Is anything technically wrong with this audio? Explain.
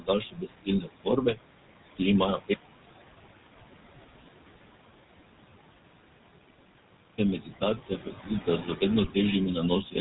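Yes, several faults affect this speech.

Noise suppressor artifacts throughout: the suppressor pulls steady noise down by about 20 dB frame by frame. A spectrogram shows blotchy, flickering background patches between syllables. The room noise sits about 12 dB below the speech.

GSM full-rate codec throughout: the 13 kbps pulse-excited vocal-tract model gives plainly audible buzzy, gravelly roughness. A spectrogram shows nothing above 4 kHz and coarse harmonics.

Speech cut by the noise suppressor at 0.0–1.38 s (about 21 dB deepest, about half a second in total), 7.4–8.3 s (about 14 dB), 8.47–8.82 s (about 11 dB) and 9.82–9.95 s (about 14 dB): speech mistaken for noise is turned down, so consonants and endings sound swallowed. The waveform shows abrupt envelope dips.

One channel inverted, 2.54–7.18 s: the speech nearly vanishes, dropping about 32 dB, and a faint residue remains. The likely cause is reversed polarity cancelling the centred voice in a mono sum. 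The waveform shrinks to a sliver.

GSM bit errors, 9.04–9.09 s: corrupted filter, pitch or gain parameters produce a squawking, gargling burst, which fits about two damaged frames. A spectrogram shows a smeared, distorted vertical blotch.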